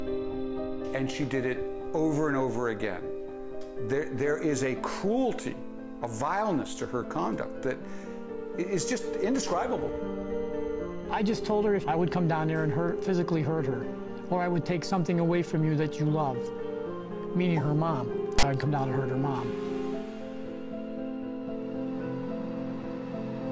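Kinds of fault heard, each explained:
File tags played as audio: at 18.39 to 18.43 s, a block of text metadata is decoded as if it were sample data, producing a 43 ms burst of loud, harsh rasp pushed toward one side of the waveform, because character bytes sit in a narrow value range. Unlike a codec glitch or a single click, it starts and stops with hard edges and has no relation to the surrounding sound.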